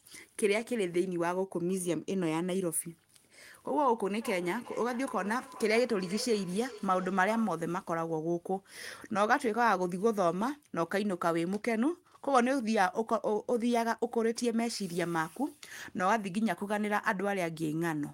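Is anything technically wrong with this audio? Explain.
Yes. Feedback echo between two devices, 4.21 to 7.69 s: a second device replays this microphone's sound, which gets recaptured, so the speech returns roughly every 0.4 s, peaking about 17 dB below the speech.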